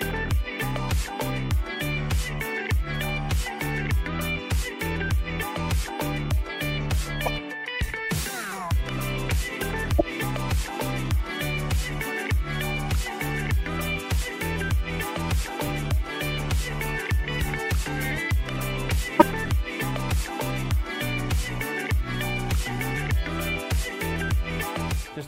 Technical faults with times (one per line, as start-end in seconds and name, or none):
7.26-7.29 corrupt frame decoded
9.99-10.01 corrupt frame decoded
15.63-15.70 corrupt frame decoded
19.19-19.27 corrupt frame decoded
23.38-23.43 corrupt frame decoded